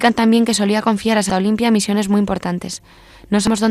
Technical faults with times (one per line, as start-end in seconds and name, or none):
1.29 damaged data in a compressed stream
3.47 damaged data in a compressed stream